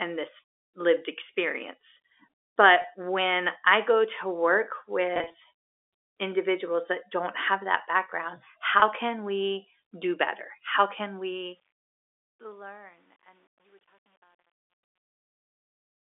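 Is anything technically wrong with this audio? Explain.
Yes, two kinds of fault can be heard in this speech.

Packet loss with pitch repetition occurs three times. The first is at 2.82–2.84 s, just before "when I go to". The second spans 5.14–5.34 s, after "I go to work", where about 100 ms of audio drops out in scattered pieces no longer than 20 ms each. The third is at 8.80–8.82 s, between "don't have that background" and "can we do better". Each gap is bridged by repeating the last pitch period, so it sounds like a brief buzzy hold. On a spectrogram these show as short stretches of frozen, evenly spaced harmonics.

Truncation distortion on a fade runs from 10.97 s to the end and is worst after 11.92 s. The smooth fade-out that starts around 11 s is rounded to too few levels without dither, which fits a 10-bit stage. Its tail turns gritty. The waveform shows square staircase steps, and the spectrogram shows broadband grit across the narrow 300–3600 Hz telephone band.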